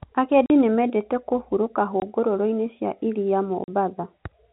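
Packet loss filled with silence opens holes in the speech at 0.46 s (40 ms, just before "nĩmendete kũhuurũka"), at 2.00 s (20 ms, just after "nĩmendete kũhuurũka"), and at 3.64 s (40 ms, just after "cia iria"). The gap lengths are whole multiples of 20 ms, which points to 20 ms packets, with one or two lost in a row. The receiver inserted silence instead of concealing the losses, so each gap starts and ends abruptly. The narrowband G.711 telephone sound continues on either side of each gap.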